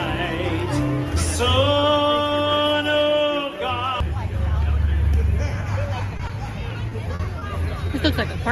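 Around 6.17 to 6.21 s and again at 6.27 to 6.31 s there's short concealed packet loss: roughly 20 ms of audio each time didn't arrive in time, so the decoder bridged the hole by extending whatever sound came just before and then eased back into the real signal. Each one comes across as a tiny smear or wobble rather than a clean dropout.

From 6.89 to 7.51 s it gets worse, with repeated packet loss giving a robotic sound. There are four separate gaps in that stretch, the longest about 40 ms, adding up to around 100 ms patched over, or about 16% of the span. Because each fill is followed quickly by the next, the sound turns choppy, with bits missing.

Two more isolated short concealed losses follow, at 7.87 to 7.91 s and at 8.31 to 8.35 s, each again about 20 ms filled in, heard as the same brief smear.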